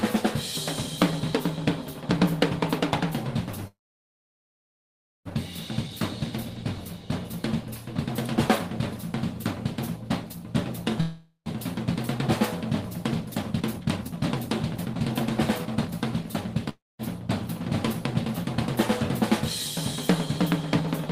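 Call audio freeze, 3.67 to 5.28 s: the sound stops and a brief fading buzz gives way to about 1.5 s of silence. It then resumes where it left off, with nothing lost, only a 1.58 s gap inserted. The likely cause is packets held up in transit, which let the jitter buffer run dry. The same stall returns at 11.01 to 11.49 s, where a 0.45 s fill carries a longer buzz and only 0.13 s of silence.

Jitter buffer speed-up, 13.21 to 14.94 s and 15.58 to 16.26 s: the receiver now holds more audio than it wants, so it repeatedly trims pitch-period-sized slices to shed the built-up delay. The audio plays at 118% and then 120% speed with unchanged pitch, which gives it a hurried quality. Roughly 0.3 s is removed in the first stretch and about 0.15 s in the second.

Call audio freeze, 16.69 to 17.02 s: a short 0.3 s stall, mostly silent for 0.21 s. It likely has the same packet-delay cause, and the audio again picks up without a loss.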